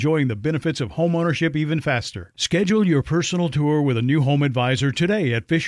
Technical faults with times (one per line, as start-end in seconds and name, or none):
none